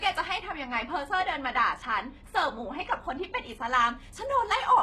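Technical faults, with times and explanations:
Throughout, HE-AAC compression. The treble of this speech sounds synthetic rather than captured. It is gritty and metallic, and s sounds come out lispy. Nothing reaches above 12.3 kHz. The damage is heavy, which points to a very low bitrate, around 16 kbps. The likely cause is spectral band replication. Only the lower spectrum is truly coded. The upper bands are copies of lower ones, shaped by a coarse envelope. Their harmonics do not line up with the real ones.
0.39 to 3.67 s, de-emphasis applied wrongly. Over this stretch the sound turns dull and muffled. The highs fall away along a smooth downward slope. At 10 kHz they sit about 8 dB below the level at 1 kHz. This is a treble cut meant to undo pre-emphasis. Here it lands on audio that never had any boost, or it is applied a second time. Nothing is left to cancel, so the top end is simply cut.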